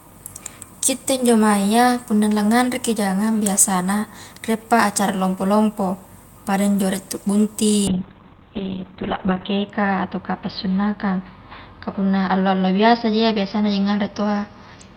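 From 7.89 s to the end, a call bitrate drop pushes the encoder from 48 to 6 kbps, narrowing bandwidth from 20 kHz to 4 kHz, so speech turns muffled and rough.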